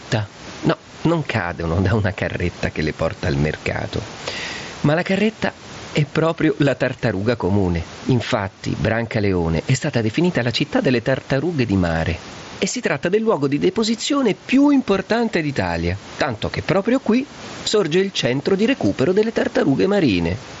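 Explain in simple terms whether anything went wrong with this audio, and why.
Gain pumping runs through the whole recording: loud and soft parts end up closer in level, and the speech sounds squashed. The likely cause is a microphone level set far too high, with a fast limiter repeatedly pulling it back down.

Clock slip clicks appear from 0.29 s to 20.5 s as faint, regular ticks about every 0.3 s, roughly seventy in all, most noticeable on loud, held sounds. They likely come from two devices keeping slightly different time, so a single sample is dropped or repeated whenever the mismatch adds up.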